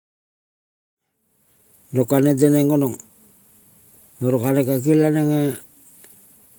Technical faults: none

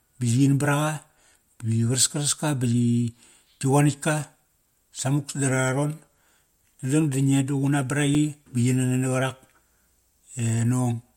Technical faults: block of digital silence

